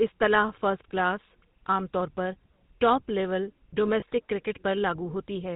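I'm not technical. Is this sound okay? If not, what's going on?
No. GSM full-rate codec, throughout: this old phone-network compression rebuilds the voice from a simplified model, cutting everything above 4 kHz and leaving a buzzy, gravelly roughness. Lost GSM frames, at 4.00 to 4.03 s, just after "طور پر ٹاپ لیول": a tiny bit of signal went missing, probably one frame, and the previous sound was briefly repeated, causing a short metallic ring.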